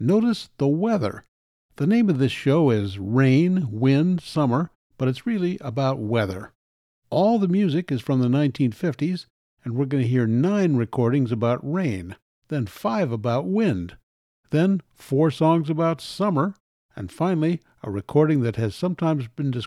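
No technical faults can be heard anywhere in this speech recording. In the pauses the output fades down to silence and the background drops away, then returns in time for the next stretch of speech without losing any of it.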